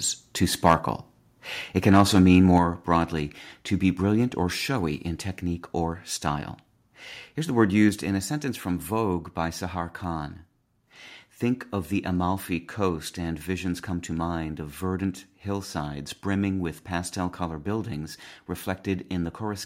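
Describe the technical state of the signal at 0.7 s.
Microphone overload, 0.66 to 0.74 s: input gain, likely too high, drives peaks about 4 dB past the converter's ceiling, clipping tops into harsh crackle.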